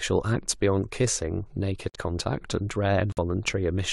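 At 1.90 s the speech just drops out for about 60 ms, then comes back at 3.12 s with another 60 ms hole. Both are corrupt frames muted: damaged compressed frames got rejected by the decoder and the player filled them with silence. The gaps cut in abruptly, and each length fits two dropped frames of roughly 30 ms. Timing stays intact, so everything after each hole lines up.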